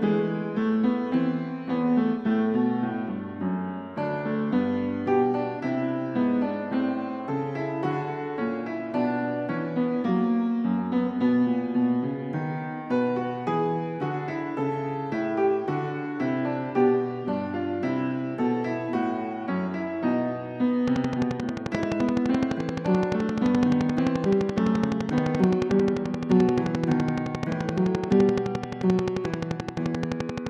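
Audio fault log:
20.88–30.48 s: train of clicks. A regular ticking at about 11.6 clicks per second runs to the end, roughly a hundred near-identical pulses. They stand well above the sound and are heard in pauses too. Likely interference from nearby equipment or a faulty connection or power supply.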